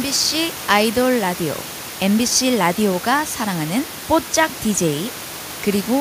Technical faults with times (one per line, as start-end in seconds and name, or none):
none